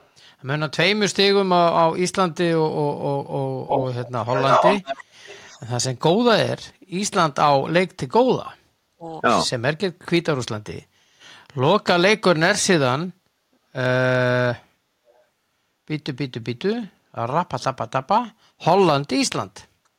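An echo leak, a copy of the speech delayed by 348 ms, appears at 0.0–0.08 s and 3.67–3.86 s, then 4.27–5.04 s, 5.25–5.65 s and 15.15–15.19 s. It is very faint at the edges but about as loud as the speech near 4 s. It is likely residual loudspeaker echo that the canceller left behind, and it shows on a spectrogram as repeated harmonic patterns offset by 348 ms.

Speech suppressed in double talk follows at 7.56–9.07 s and 9.6–10.16 s. The speech collapses very deeply, likely because the echo canceller attenuated it during overlapping talk, leaving near-flat waveform gaps and spectrogram holes.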